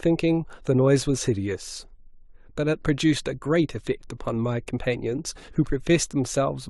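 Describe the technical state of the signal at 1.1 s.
At 1.1 s the signal is intact, with no audible fault in the speech at that moment.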